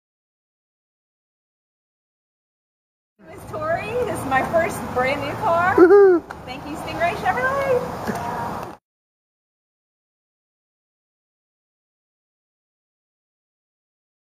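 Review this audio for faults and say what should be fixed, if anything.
At 6.24 to 6.29 s there is an AAC frame loss with concealment. About 43 ms of audio went missing, which fits a single dropped frame. The decoder patched the gap by reusing the last good spectrum with scrambled signs or interpolated energy, so the patch sounds briefly smeared and noisy. On a spectrogram this appears as a narrow vertical band where detail blurs into diffuse energy. The waveform shows the fine structure turning noise-like for that instant. Sending the stream with forward error correction or a retransmission buffer would prevent the loss.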